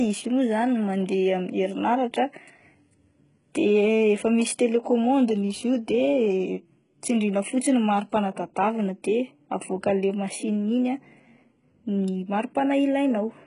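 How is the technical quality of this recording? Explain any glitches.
Quality is poor throughout. From start to finish the s sounds are gritty and lispy and the treble is synthetic, with nothing above 11.1 kHz. This is likely heavy HE-AAC compression, with the upper band rebuilt from copied lower bands, consistent with a very low bitrate near 12 kbps.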